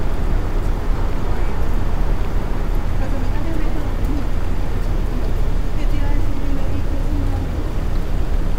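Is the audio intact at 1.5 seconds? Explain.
Yes, the audio is intact at 1.5 seconds, with no audible fault at that moment.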